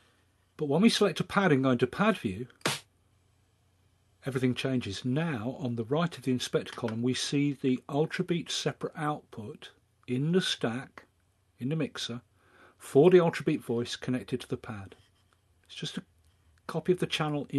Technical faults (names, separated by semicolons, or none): none